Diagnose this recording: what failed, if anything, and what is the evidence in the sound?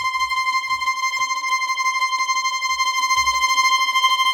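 Nothing failed: no stage in the chain, from wiring through to playback, leaves any audible mark on the recording.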